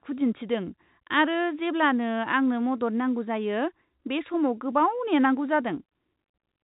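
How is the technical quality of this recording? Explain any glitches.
Nothing stood out on listening to this telephone-band speech recording, with no glitches to explain.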